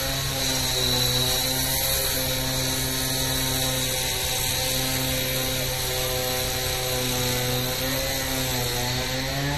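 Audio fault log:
throughout, MP3 compression: a plainly audible watery swirl with nothing above 13.1 kHz, likely from MP3 encoding starved of bits, which fits about 40 kbps.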